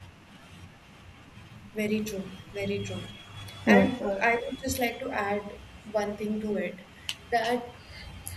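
The clip is speech with two faults. Echo leak comes through at 2.42–2.53 s, 3.18–3.40 s, 3.99–4.22 s, 7.43–7.80 s and from 8.19 s to the end. A delayed copy of the speech arrives about 325 ms late in the first three and about 351 ms late in the last two. The first two are barely audible. The one near 4 s is strong, only about 10 dB down. The last two sit in between. The likely cause is a loudspeaker at the far end whose echo canceller lets part of the microphone pickup back into the call. Speech is suppressed in double talk at 4.38–4.67 s, just after the loudest echo. The speech drops by up to about 20 dB for roughly 300 ms. This is likely the echo canceller failing to tell the talker from the returning echo while both overlap, so it turns both down.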